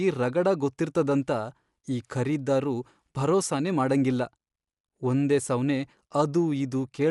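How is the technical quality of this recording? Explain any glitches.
The recording has audible codec damage from start to finish. The speech sounds dull and rough throughout, and nothing comes through above 11.5 kHz. That's likely Dolby Digital compression at a low bitrate, roughly 64 kbps going by the sound. At that rate the encoder narrows the band and starves many frequency lines of bits, and the decoder fills them with noise, giving a gritty, fluttering edge around the voice.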